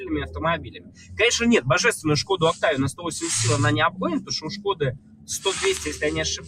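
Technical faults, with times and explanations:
Throughout, noise suppressor applied to music or sounds: a suppression stage tuned for speech stays active across the whole clip and keeps treating steady, sustained material as background noise. Its gain rides up and down by something like 15 dB, so held parts and decaying tails sink while sharper onsets survive, giving a pumping, thinning character. Unlike a compressor's pumping, which follows overall loudness, this follows how noise-like or steady the sound is.
0.57 to 1.19 s, 4.2 to 4.65 s and 4.92 to 5.3 s, sound cut by the noise suppressor: in these three stretches the suppressor judges the sound as noise and pulls it down further than the surrounding audio, by about 16 dB, about 13 dB and about 17 dB at the deepest points. The level sags or tails end early rather than vanishing outright, which separates these from dropouts, where the signal is lost completely and abruptly.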